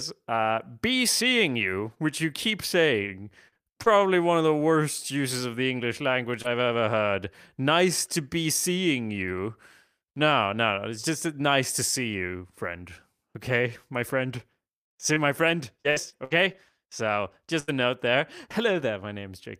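From 1.45 to 4.02 s, scattered short gaps: roughly five lost or late packets, the longest around 40 ms, are patched by extending the preceding sound, leaving brief ticks and smears.

At 5.18 to 5.20 s, just after "one of the worst", a lost packet is rebuilt from error correction. The decoder plays a low-bitrate 20 ms copy carried in the next packet, so the audio sounds briefly rougher and noisier but has no gap.

From 6.42 to 6.46 s, just before "ever heard", there is a short concealed packet loss. About 20 ms is missing and is filled by continuing the last sound, giving a brief smear. Within that span, from 6.44 to 6.46 s, another lost packet is rebuilt from error correction and sounds rougher.

From 15.14 to 17.84 s, repeated packet loss produces robotic sound. Seven gaps totalling 280 ms, the longest 78 ms, are concealed one soon after another, covering about 10 percent of the stretch. 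The result is choppy speech with fragments missing.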